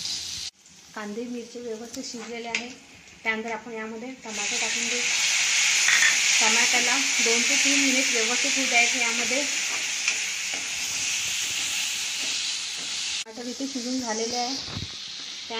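No technical faults can be heard anywhere in the clip.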